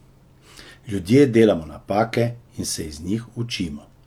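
Listening to the speech recording, nothing stood out as a technical problem anywhere in it.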